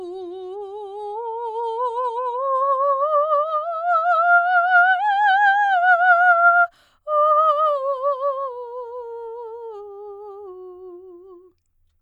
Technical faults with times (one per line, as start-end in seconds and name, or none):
0.00-6.00 adaptive stream starting at a low bitrate